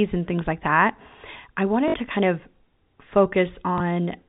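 Packets went missing and the receiver replayed the last good one to fill each gap, so this is packet loss with last packet repeated. At 1.88 to 1.94 s, between "things like that I" and "to kind of", 60 ms was lost, which fits three 20 ms packets, giving a brief robotic stutter. At 3.78 to 3.80 s, a single 20 ms repeat produces a small blip.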